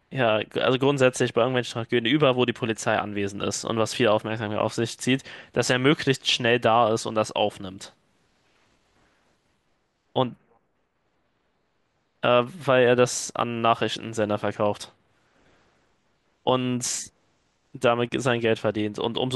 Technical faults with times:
1.17 repeated buffer

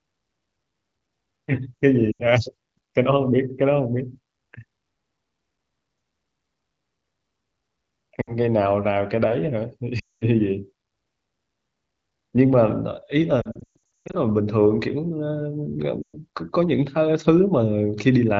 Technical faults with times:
2.11-2.22 lost AMR speech frames
8.22-8.37 lost AMR speech frames
9.99-10.25 lost AMR speech frames
13.41-14.15 lost AMR speech frames
16.02-16.17 lost AMR speech frames

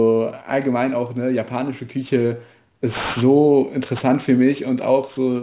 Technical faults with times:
0.00-5.42 aliasing

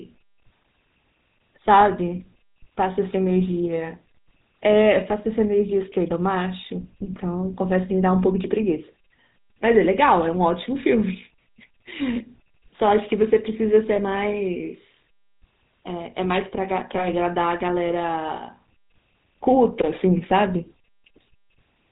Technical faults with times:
0.00-21.91 GSM full-rate codec
13.96-14.00 lost GSM frames

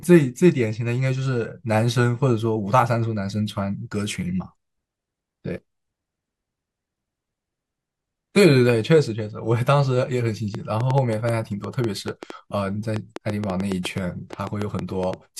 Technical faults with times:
10.55-15.14 train of clicks

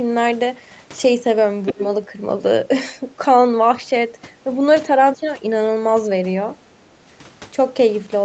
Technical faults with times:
1.66-1.83 other side's voice leaking through
1.72-1.81 speech suppressed in double talk

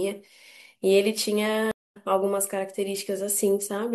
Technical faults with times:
1.71-1.97 stream reconnect

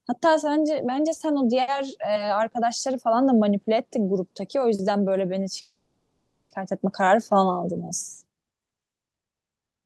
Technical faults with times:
5.61-6.52 call audio freeze

